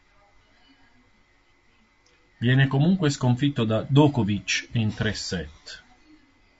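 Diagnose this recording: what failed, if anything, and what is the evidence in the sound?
Throughout the speech the voice has a rough, grainy texture, with a hiss-like fill between the harmonics and a top band that sounds thin and somewhat synthetic. This points to the codec stage, most likely low-delay AAC compression of the AAC-ELD kind used for calls. Its short frames resolve pitch harmonics coarsely and spend bits quickly, so at a rate that sounds like about 32 kbps the spaces between harmonics fill with noise and the highs are rebuilt rather than carried.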